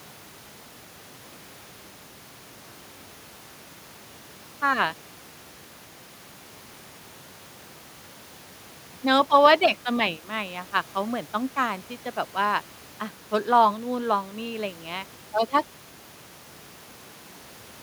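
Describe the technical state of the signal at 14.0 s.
At 14.0 s the speech signal is intact, with no dropout, clipping, click or other fault.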